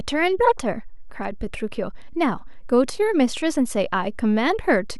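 A constant DC offset of about -32 dBFS shifts the speech waveform off zero throughout, eating headroom and adding steady energy at 0 Hz without an audible tone.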